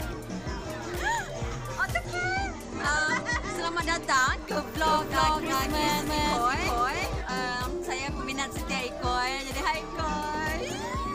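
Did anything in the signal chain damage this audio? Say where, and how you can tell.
Yes. From 1.86 to 4.39 s the treble dulls and gritty noise rises: a Bluetooth SBC bit pool drop at the codec, consistent with bit pool 31 falling to 14, near 99 kbps.

From 4.83 to 7.21 s a dry, equally loud copy trails by roughly 0.4 s, starting and stopping abruptly: a doubled audio track, likely from a second, slower capture path.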